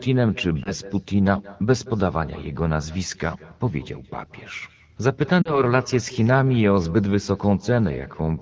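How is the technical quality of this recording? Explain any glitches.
The recording has two faults: a constant echo and two brief dropouts. The speech itself comes through a clear wideband call path, consistent with AMR-WB at 12.65 kbit/s.

Echo with no canceller runs through the whole clip. The far end is playing the call on a loudspeaker, and its microphone captures that playback with nothing removing it, so the talker's own voice returns after the network round trip. Every phrase is shadowed roughly a fifth of a second later by a copy about 21 dB quieter, sounding thinner than the direct voice.

Lost AMR speech frames occur at 0.63 to 0.72 s and at 5.42 to 5.61 s. Radio errors corrupted frames, and the AMR decoder filled the gaps by reusing the last good pitch and vocal tract settings at falling gain. The first is a short dip or warble, consistent with a single 20 ms frame. The second is longer and drops to near silence, pointing to two consecutive frames (40 ms), before the voice returns briefly weak or rough.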